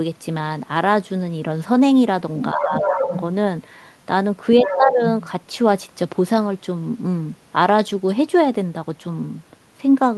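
A speech recording carried over a call link, with two kinds of fault. The other side's voice leaking through appears at 2.40 to 2.46 s, 2.74 to 3.22 s and 4.63 to 4.78 s. It sits about 10 dB, then about 5 dB, below the main speech, likely loudspeaker echo the canceller missed. Speech suppressed in double talk follows from 2.54 to 3.13 s and 4.65 to 5.00 s. The talker's voice drops by roughly 10 dB there, likely because the canceller turned everything down while both sides overlapped.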